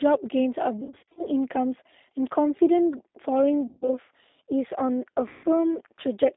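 The whole thing runs through a G.729 codec, so it's band-limited to roughly 250 Hz–3.7 kHz and sounds plainly rough and synthetic, typical of 8 kbit/s. Then there's VoIP packet loss concealed by the speech codec at 0.81–1.23 s, 3.67–3.90 s and 5.28–5.46 s. The decoder stretches the last sound into a fading buzzy smear, and the first stretch stutters like scattered short gaps.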